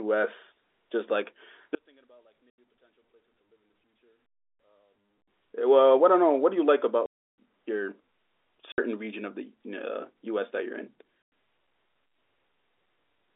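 Speech on a telephone line, and the band itself sounds right, roughly 300 Hz to 3.6 kHz as you'd expect from G.711. The real trouble starts at 1.75 s: the voice nearly disappears, dropping by about 38 dB until 5.28 s. That's most likely one channel inverted, where one side is polarity-flipped and the centred voice cancels when the two are summed to mono. There's also packet loss filled with silence. Hard-edged holes land at 2.50 s, 7.06 to 7.30 s, 8.73 to 8.78 s and 11.22 to 11.32 s. The dropouts come in steps of 20 ms, which points to 20 ms packets going missing and the receiver playing nothing in their place.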